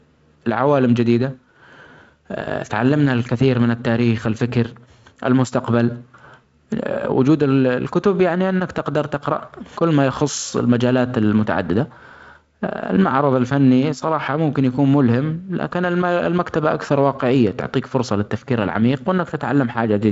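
No technical faults can be heard anywhere in this speech recording. The G.722 wideband telephone coding shows up as nothing above about 7.7 kHz and a light coding hiss that fits its lowest, 48 kbit/s mode.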